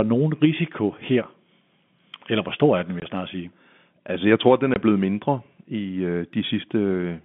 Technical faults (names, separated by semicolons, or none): packet loss filled with silence